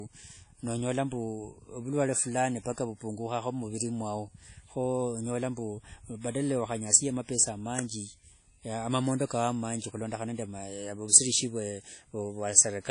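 From start to finish the speech carries plainly audible codec damage. Nothing comes through above about 10.1 kHz, and the quantisation noise smears over tens of milliseconds, so the speech rings and gets a washy hiss that swells and fades with the voice. That's likely WMA compression, a transform codec running long blocks, and the amount of damage points to a low bitrate, something like 32 kbps.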